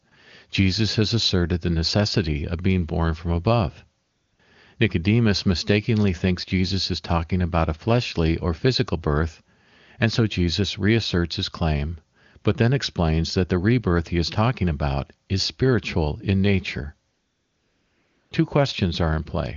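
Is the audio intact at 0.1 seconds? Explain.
No. From 0.09 to 0.11 s the phone treated the line as silent and sent no speech frames for 20 ms, so the receiver substituted AMR comfort noise built from a rough level and spectrum estimate. The real background gives way to a smooth, steady hiss.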